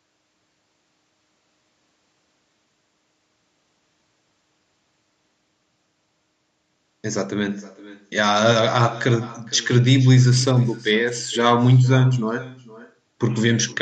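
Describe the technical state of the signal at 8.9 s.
A faint, thinner copy of the speech trails about half a second behind, some 22 dB down: an echo with no canceller, present throughout.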